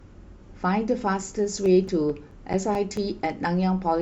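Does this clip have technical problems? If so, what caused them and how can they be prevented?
Yes. CD scratch ticks: ten regularly spaced ticks, each only a few milliseconds, run through the speech from 1.44 to 3.41 s, about five per second, once per disc turn where a scratch exceeded error correction. That steady rhythm separates them from random vinyl clicks. Clean or resurface the disc, or re-rip it with a secure, error-checking ripper.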